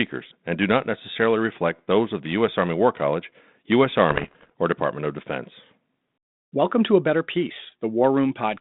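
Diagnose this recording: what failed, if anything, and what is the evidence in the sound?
The damage is on the transmission link feeding the ADPCM decoder, which points to bit errors on an ADPCM link. From about 4.11 to 4.50 s the speech breaks into pops and a gritty, rough burst with quick jumps in level, all inside the narrow 150 Hz to 3.7 kHz phone band of what sounds like 32 kbit/s G.726. A flipped bit throws off the decoder's adaptive step size and predictor, so each hit rings on briefly. The density suggests roughly a percent or two of bits corrupted.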